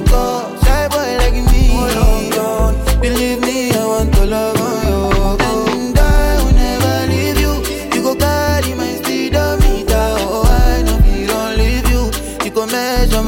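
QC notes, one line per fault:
5.73–5.76 s loud pop: one sharp thump about 10 dB above the sound, likely a voltage glitch; tall waveform spike, full-height spectrogram stripe.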